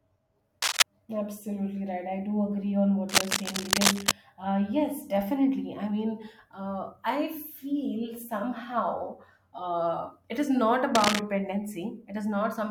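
Speech recording with cable scratch noise: dense, uneven crackling bursts from 0.62 to 0.83 s, a little louder than the speech; from 3.09 to 4.12 s, between "agree on what" and "uh yes definitely I"; and from 10.95 to 11.20 s after "uh it is not", both roughly level with the speech. The likely cause is a worn cable or connector being moved and shifting its contact resistance.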